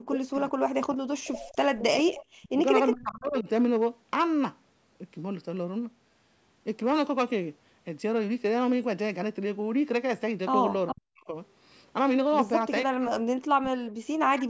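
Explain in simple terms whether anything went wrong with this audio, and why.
Hard clipping runs through the whole clip. The sound was pushed louder than the recording chain could carry, so the tops of the loudest moments were sliced flat. Only a small share of the sound is affected, and it comes across as a brittle crackle on peaks.

Speech suppressed in double talk occurs at 0.0–0.52, 0.84–1.84, 2.4–2.53, 2.93–3.48, 10.93–11.35 and 12.85–14.47 s. In these stretches the speech sinks sharply or cuts out in pieces. Both sides were likely talking at once. The call's echo canceller couldn't separate the talker from the returning echo, so it turned everything down.

Echo leak appears at 2.15–2.25 and 10.87–10.93 s. A faint copy of the speech slips through, arriving about 0.41 s late. The far end was likely on a loudspeaker, and its echo canceller didn't remove everything its microphone picked up, so a scrap was sent back.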